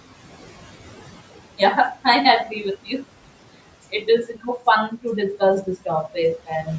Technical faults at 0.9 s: noise suppressor artifacts

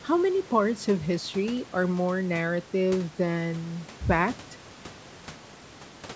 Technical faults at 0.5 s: none

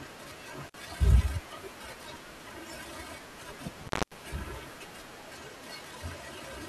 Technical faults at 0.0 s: none

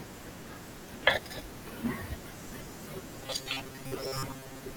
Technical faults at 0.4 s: none

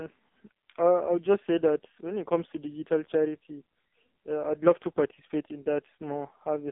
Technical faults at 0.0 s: AMR narrowband mobile codec

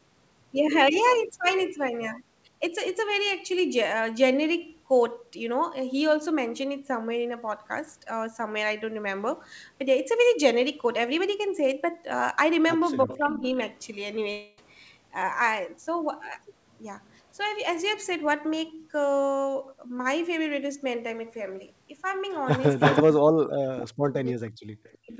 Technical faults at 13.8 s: echo leak

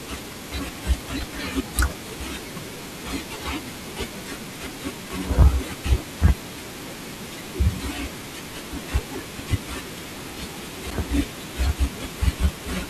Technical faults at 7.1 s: low bit depth without dither

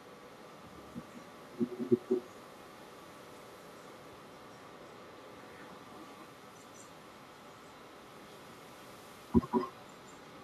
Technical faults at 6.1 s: echo with no canceller

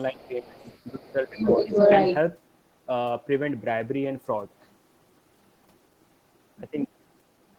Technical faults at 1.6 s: other side's voice leaking through; speech suppressed in double talk

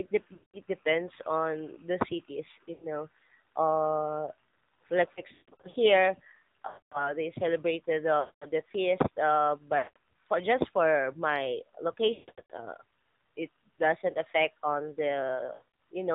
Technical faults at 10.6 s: AMR narrowband mobile codec

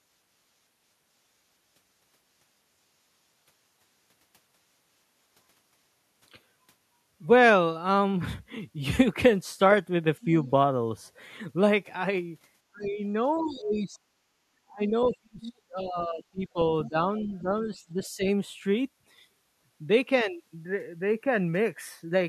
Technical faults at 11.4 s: none

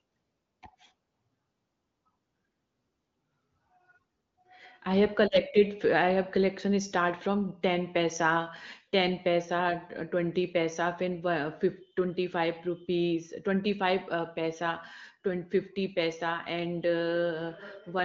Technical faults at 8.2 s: none

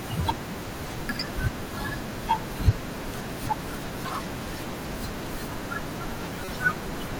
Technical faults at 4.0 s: damaged data in a compressed stream

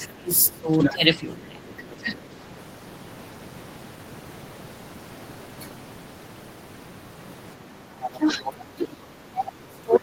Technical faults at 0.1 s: speech suppressed in double talk; other side's voice leaking through

